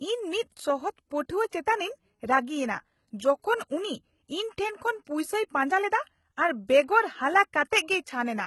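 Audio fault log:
Throughout: HE-AAC compression, likely the cause of heavily damaged treble. Nothing sounds above about 11.8 kHz, and the band replication above the coded range turns s sounds gritty and lispy, with harmonics out of line. This fits a bitrate of about 16 kbps.
7.70 to 7.72 s: pre-echo, a 20 ms smear before a sharp attack in the speech. The codec spreads quantisation noise sized for the loud attack across its whole block, so a short hiss fills the quiet moment ahead and dulls the onset.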